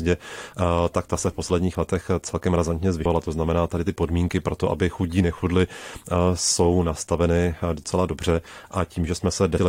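At 3.04 s and 9.57 s, damaged data in the compressed stream makes the decoder lose frame sync, giving brief blips seen as thin broadband spectrogram streaks and waveform discontinuities.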